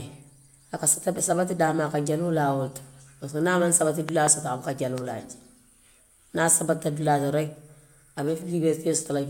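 At 4.09 to 4.29 s, just before "soto a", a loud pop lands as two sharp thumps well above the speech. A single, softer pop follows at 4.98 to 5.00 s. Speech continues beneath both, unlike a dropout, which points to a likely voltage spike from a plug or switch.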